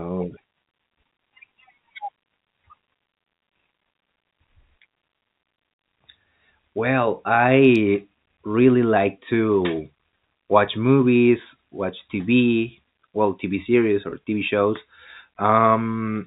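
Speech over a narrowband telephone-style path, and at 14.10 to 14.12 s there's a brief packet loss with pitch repetition: roughly 20 ms of audio goes missing, consistent with a single dropped packet, and the receiver fills the hole by replaying the last pitch period, so you get a short, slightly buzzy held moment.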